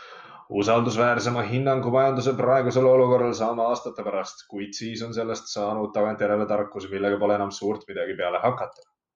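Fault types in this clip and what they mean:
Nothing stood out as a technical fault on listening to this speech recording.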